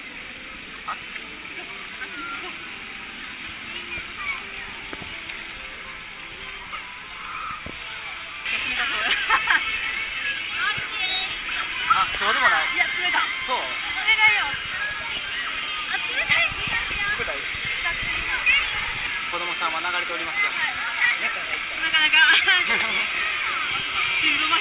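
No faults detected; the audio arrives through a call path whose band stops at 4 kHz, consistent with G.711 A-law coding.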